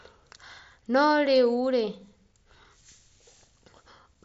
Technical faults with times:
none

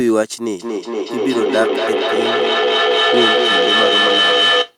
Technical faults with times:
0.59-4.77 feedback echo between two devices

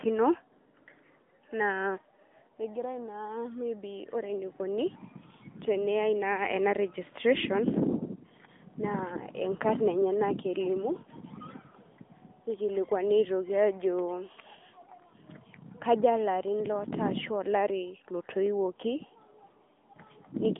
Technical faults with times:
0.00-20.60 AMR narrowband mobile codec

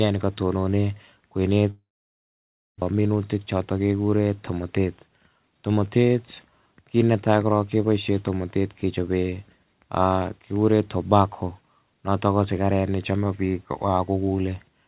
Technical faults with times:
1.70-2.84 long network dropout
2.91-3.80 jitter buffer speed-up

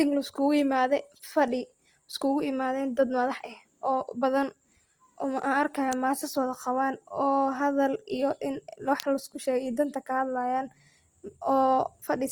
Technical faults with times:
0.00-12.32 Opus compression

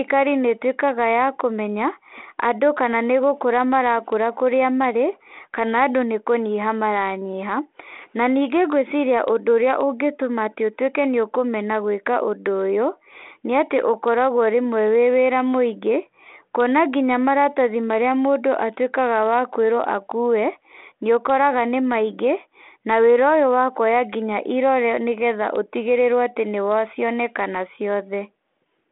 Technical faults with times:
none

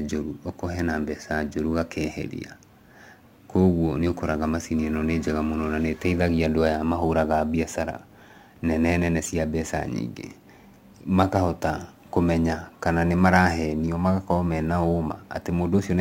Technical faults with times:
0.00-16.01 crude rate conversion

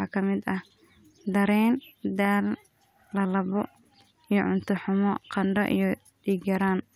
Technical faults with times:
none

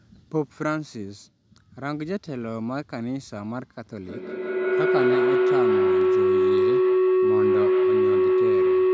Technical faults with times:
4.01-8.93 feedback howl

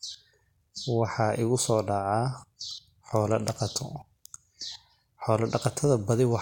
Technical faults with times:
none

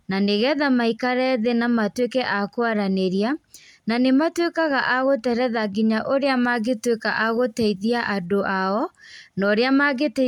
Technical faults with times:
6.26-8.26 pre-emphasis left on

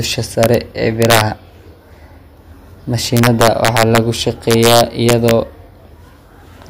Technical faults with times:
0.43-0.54 integer overflow
1.02-1.21 integer overflow
3.17-3.98 integer overflow
4.51-5.31 integer overflow

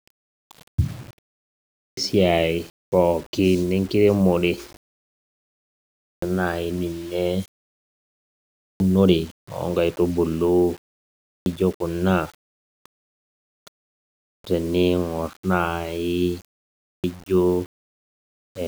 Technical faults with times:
0.00-18.67 low bit depth without dither
1.70-1.97 clipped start after a pause
5.93-6.22 clipped start after a pause
8.51-8.80 clipped start after a pause
11.21-11.46 clipped start after a pause
14.18-14.44 clipped start after a pause
16.74-17.04 clipped start after a pause

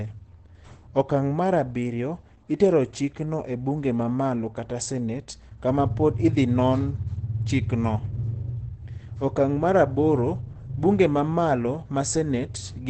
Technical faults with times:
0.00-12.89 Opus compression

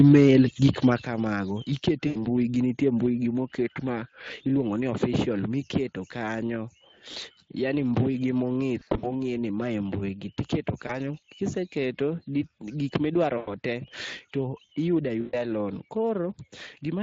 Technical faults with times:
0.00-17.02 Speex codec
1.02 microphone volume stepped down
2.07-2.27 VoIP packet loss concealed by the speech codec
8.79-9.21 VoIP packet loss concealed by the speech codec
10.87-10.94 VoIP packet loss concealed by the speech codec
13.37-13.53 VoIP packet loss concealed by the speech codec
15.21-15.45 VoIP packet loss concealed by the speech codec

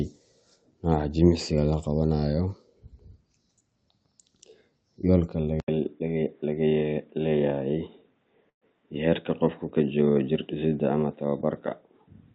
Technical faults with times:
5.60-12.35 input switched to a poorer device
8.49-8.64 call audio freeze

